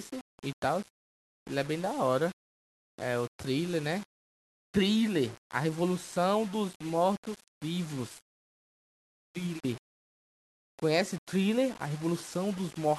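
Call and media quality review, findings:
Grainy, fizzy distortion riding on the speech for the whole clip, worst on quiet tails and soft syllables, which sputter or drop out between steps. Likely low bit depth without dither somewhere in the capture or export chain, around 6 bits with plain rounding. The error tracks the signal, so it sits only about 20 dB under the speech.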